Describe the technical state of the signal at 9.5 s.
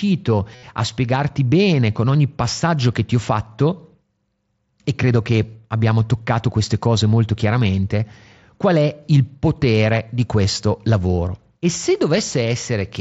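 At 9.5 s the speech comes through intact, carried over the Bluetooth mSBC headset link with only its usual light codec grain and no fault at that moment.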